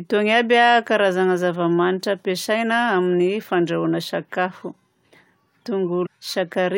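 A stream segment skipped at 6.05 to 6.07 s near the end of the speech. The sound jumps abruptly forward, with a brief blip over those 20 milliseconds where the continuity breaks, so the speech resumes further along than it should. The likely cause is that one chunk of a segmented stream failed to load and the player moved straight on to the next one, dropping that stretch of the programme.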